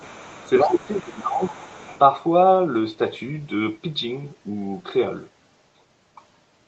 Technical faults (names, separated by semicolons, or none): other side's voice leaking through; speech suppressed in double talk